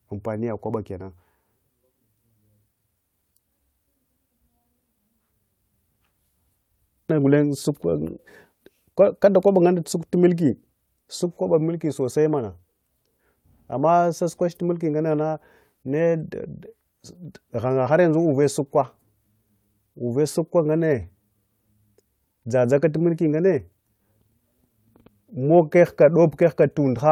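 No technical faults can be heard anywhere in this speech recording. The audio runs without any audible interruption or disturbance at any point.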